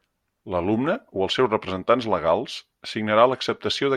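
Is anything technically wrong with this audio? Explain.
No, nothing technically wrong can be heard in this speech clip. No part of it points to a problem in how the audio was captured or delivered.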